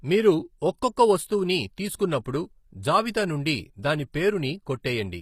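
Speech throughout with plainly audible HE-AAC compression damage: the treble sounds synthesized and s sounds turn gritty and metallic, likely from spectral band replication at roughly 24 kbps.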